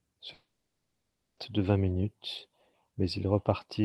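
At 0.33 s the speech smears into a brief fading buzz, then drops to near silence for about 0.95 s before resuming at 1.39 s on "de vingt minutes". Over a call path that sounds like Opus near 32 kbps, this is likely a long network dropout: about 1.04 s of audio never arrived and was lost.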